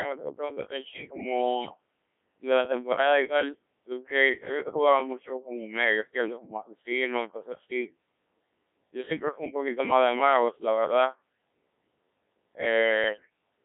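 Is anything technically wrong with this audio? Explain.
Yes. The whole recording sounds robotic and buzzy, with a thin band of roughly 200 Hz to 3.5 kHz and heavy damage to the speech's natural texture. This is the Codec 2 vocoder, and the sound fits its 1.3 kbit/s mode. Instead of keeping the waveform, the codec sends only pitch, voicing, energy and a coarse spectral envelope, and the decoder rebuilds the voice from sine waves. That synthetic reconstruction causes the mechanical, hollow quality heard throughout.

At 1.61 to 1.78 s and again at 13.04 to 13.29 s, the voice suddenly lurches in pitch and loudness and changes tone colour, breaking into warbling, bleep-like gibberish. These are bit errors on digital voice radio. At such a low bitrate, each bit sets the pitch, level, voicing or spectrum of an entire frame. An error rate of several percent corrupts a few consecutive frames, and the synthesiser faithfully produces nonsense from them.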